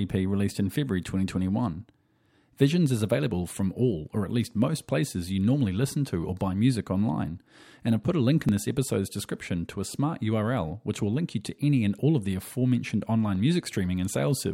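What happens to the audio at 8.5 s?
At 8.49 s, after "put a link in", the audio jumps ahead at a likely dropped buffer (overrun): about 10 ms overwritten unread, spliced shut, no silent gap.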